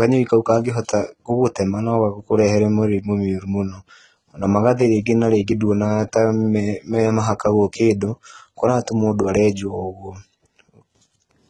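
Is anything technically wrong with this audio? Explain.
Yes. Throughout the speech, the treble sounds rebuilt rather than recorded, most likely from HE-AAC compression at a very low bitrate, around 16 kbps. Only the lower spectrum is truly coded. The upper bands are copied up from below and given a coarse envelope, so harmonics misalign across the crossover and s sounds turn gritty and lispy. A spectrogram shows repeated, smeared high-band texture and nothing above 11.8 kHz.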